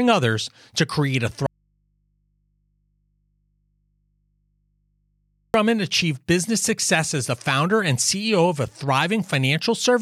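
At 1.46 s, right after "others to create a", the speech drops out abruptly and doesn't return until 5.54 s, just before "achieved business success as". That's an audio dropout to a faint residue lasting about 4.08 s. The gap isn't silent: a low mains hum sits there, somewhere around 45 dB below the speech. The cause is likely a lost feed upstream while the input after the break stayed live and kept picking up hum.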